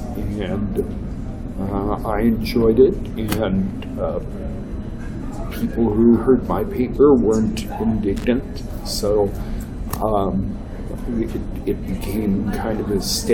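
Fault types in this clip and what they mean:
loose connector crackle: a worn or dirty contact in the signal path is making and breaking as it shifts, chopping the audio, so a brief irregular burst of crackle and scratching is heard from about 8.16 to 8.24 s.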